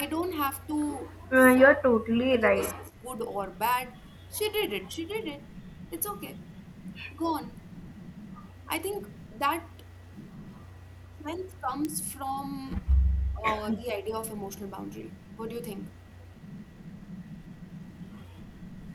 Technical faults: word clock ticks; speech suppressed in double talk; echo leak

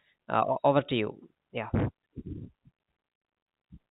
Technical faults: none

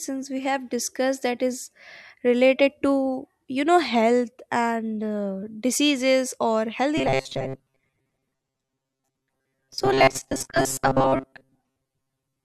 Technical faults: robotic sound from repeated short buffers

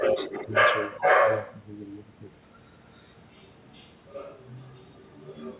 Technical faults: other side's voice leaking through; speech suppressed in double talk

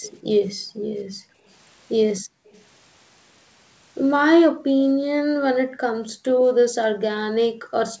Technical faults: echo leak; background gated by the echo canceller

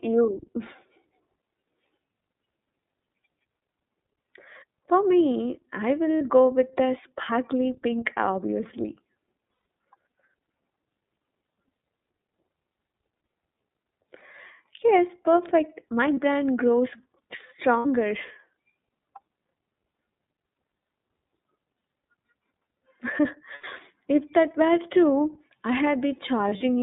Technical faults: iLBC codec; lost iLBC frames

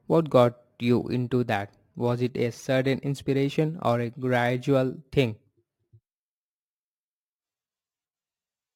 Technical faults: crude rate conversion

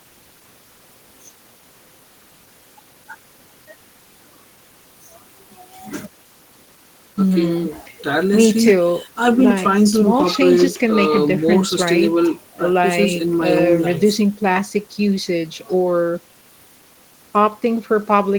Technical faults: none

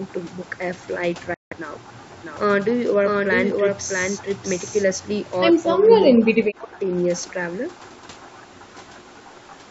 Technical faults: Bluetooth dropout; speech suppressed in double talk

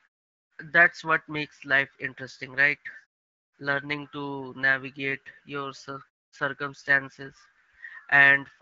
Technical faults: none

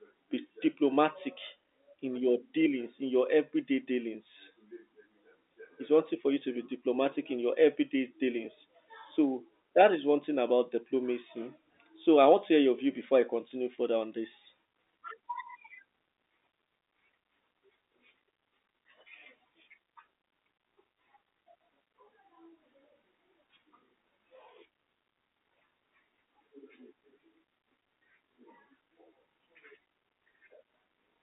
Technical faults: none

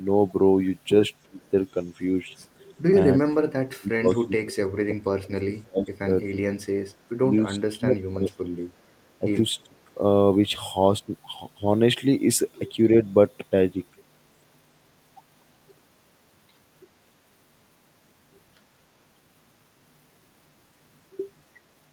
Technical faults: speech suppressed in double talk; echo leak

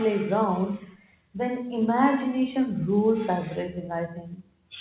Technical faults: none

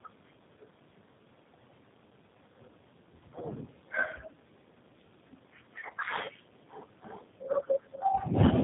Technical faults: tandem speech coding

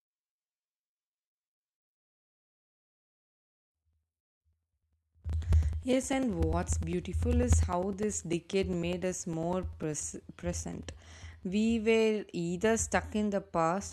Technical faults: periodic USB or driver dropouts

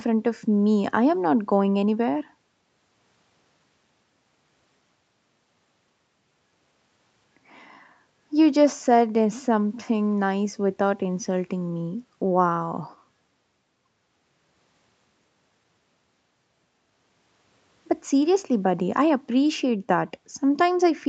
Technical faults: none

